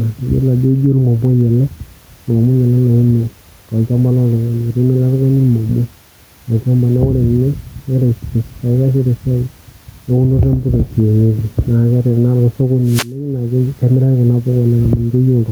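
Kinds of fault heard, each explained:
Gain pumping: Throughout the clip, the level is pulled down and let back up, a swing of about 5 dB. This is likely a fast limiter or compressor reacting to microphone gain set too high. Each loud syllable makes it clamp the level down, then it releases; the room noise sits about 43 dB below the speech. Loud and quiet passages end up squashed closer together.
Wireless microphone noise hit: From 12.84 to 13.19 s, a burst of hiss-like static sweeps across the speech for about a third of a second. The analogue FM radio link briefly lost strength as reflected copies of the transmitted signal arrived out of step and cancelled at the receiver. With the wanted signal weakened, the receiver's own noise surged into the audio as a short swish.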